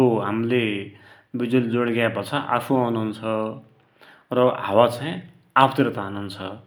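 No audible technical faults occur anywhere in this speech.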